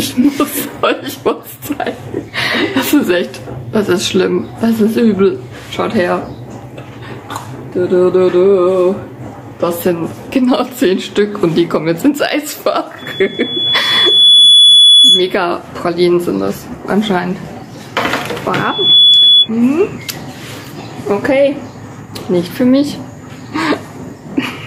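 Throughout the clip the background swells up in every gap and ducks back under each loud sound, by about 10 dB, leaving the sound squashed and flat in level. This gain pumping is likely a fast limiter or compressor clamping down on input gain set far too high.

From 12.98 to 15.38 s a steady 3.4 kHz tone rises over roughly a second and a half into a loudspeaker feedback squeal, around 10 dB above the sound. It returns from 18.57 to 19.49 s, building in under half a second. The microphone is picking up its own loudspeaker, and at 3.4 kHz the loop gain exceeds one.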